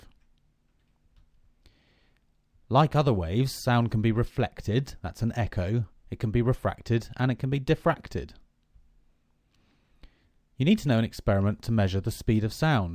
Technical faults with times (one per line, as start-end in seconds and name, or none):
none